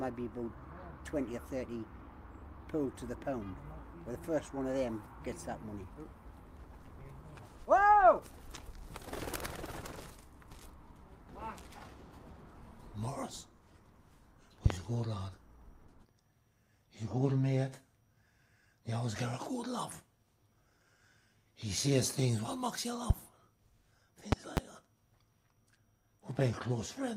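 Loud pops hit at 14.66–14.73 s as a quick double, 23.10–23.13 s as a single, and 24.32–24.60 s as another pair. They jump roughly 20–25 dB above the sound, which carries on underneath. Likely a voltage spike from a plug, switch or static.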